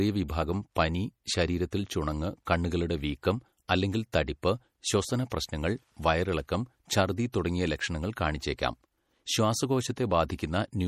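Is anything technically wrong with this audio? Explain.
Yes. Throughout the clip, speech sounds watery, with nothing above 15.9 kHz. This is likely MP3 compression, which fits a low bitrate near 48 kbps that drops weak frequency lines.

Pre-echo occurs at 4.12, 5.30 and 7.32 s. The codec smears quantisation noise ahead of sharp attacks, leaving a brief hiss 14 to 18 ms long before each onset.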